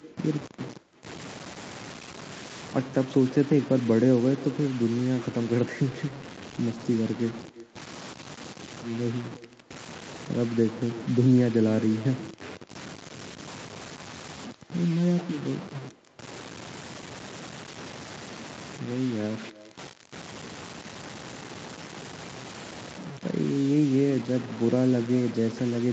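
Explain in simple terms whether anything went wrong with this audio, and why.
The speech sounds gritty and grainy from start to finish, and the roughness shifts with each sound. Quiet moments crackle rather than fading smoothly. That points to low bit depth without dither: the audio was likely stored with only a few bits and rounded down, so fine detail becomes harsh grain.

A faint, hollow copy of every phrase follows about a third of a second behind it, all the way through. This is echo with no canceller: the far end's loudspeaker leaked back into its microphone, and nothing on the call removed that returning copy.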